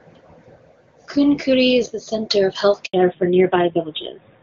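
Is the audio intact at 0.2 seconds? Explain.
Yes, the speech at 0.2 seconds is intact, coming through the AMR wideband (HD Voice) codec at a high rate where it stays clear with no audible fault.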